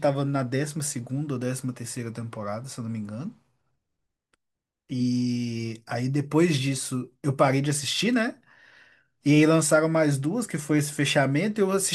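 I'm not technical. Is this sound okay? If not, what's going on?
Yes, this one sounds fine.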